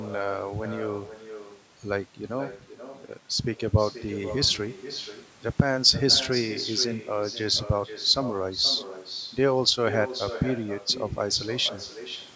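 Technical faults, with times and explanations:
Throughout, echo with no canceller: the far end plays the call over a loudspeaker, its microphone picks that back up, and nothing subtracts it, so every phrase returns about half a second later, about 12 dB down, as a thinner shadow.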